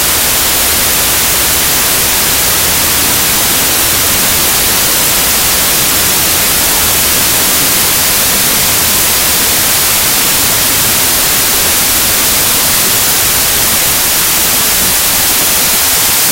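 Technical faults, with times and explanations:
Throughout: wrong sample width. The audio plays at half speed, an octave low, under loud hiss-like noise. This fits 32-bit samples being read as 16-bit. Each original sample splits into two values, doubling the count and halving the speed. One half of each pair holds the real signal's top bits, so a slowed, rough version of the sound remains. The other half holds low-order bytes, which add the broadband noise.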